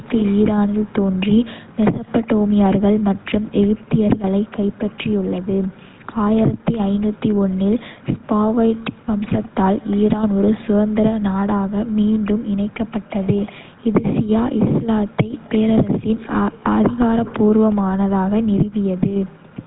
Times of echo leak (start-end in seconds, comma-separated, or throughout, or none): 0.04-9.97